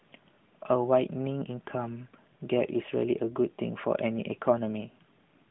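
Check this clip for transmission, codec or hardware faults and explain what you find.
No transmission, codec or hardware faults found here.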